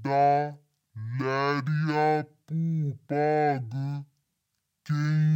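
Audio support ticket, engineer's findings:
Speech slowed to half speed, dropped a full octave, for the whole clip. Stereo read as mono: interleaved left/right samples read sequentially as one channel, doubling playback length.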